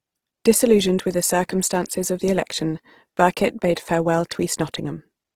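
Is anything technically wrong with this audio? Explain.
Yes. Throughout the speech, the sound is rough and grainy, with a noisy sheen on the voiced tones. This is likely Opus compression working in its music (CELT) mode at a starved rate, which fits about 16 kbps. Short of bits, the encoder still preserves each band's energy but refills the fine detail with folded copies of lower bands or with noise. The bandwidth stays full rather than muffled. Unlike MP3, it has almost no swirling or warbling spectral holes; the damage is graininess instead.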